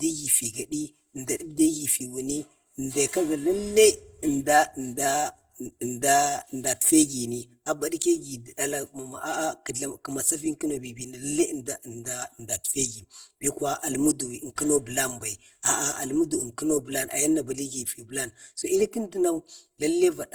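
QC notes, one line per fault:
Throughout: channel delay (comb filtering). One channel runs about 3 ms behind the other, and the mono sum of the speech cancels at evenly spaced frequencies. The first notch falls around 150 Hz, with further notches repeating about every 330 Hz above it. These fixed holes in the spectrum give the voice a hollow, phasey colour that does not move over the clip. A delay of this size fits a short buffer offset between the channels.
Throughout: Opus compression. The speech has a rough, grainy texture, with harmonic detail smeared into noise rather than swirling or dropping out. This fits Opus in its music (CELT) mode. That mode keeps each band's energy but refills starved bands with folded or noise content, so tones lose definition instead of leaving gaps. Bandwidth stays full, with content reaching 20.2 kHz. The damage is plainly audible and is likely from a low bitrate around 24 kbps.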